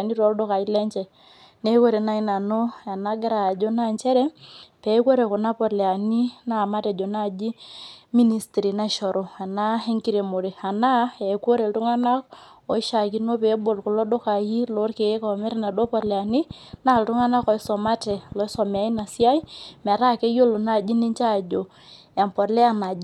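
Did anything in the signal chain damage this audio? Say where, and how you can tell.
Yes. A train of clicks runs from 15.84 to 19.45 s, ending just before "metaa keyiolo": around fifteen near-identical pulses at a regular 4.45 per second, peaking about as loud as the speech itself. The clicks continue through pauses, so they were added on top of the signal rather than carved out of it as dropouts would be. Their steady pace and identical shape point away from random codec glitches and toward the likely cause, periodic interference reaching the analogue wiring or interface.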